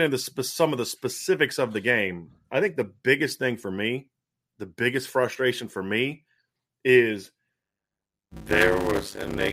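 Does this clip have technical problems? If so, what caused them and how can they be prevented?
Yes. Block size mismatch (padded), 7.62 s to the end: each short block, likely 256 samples, is zero-filled, causing a 100 Hz buzz and speech slowed to 0.533 speed. Making each stage write exactly the block size the next stage reads prevents this.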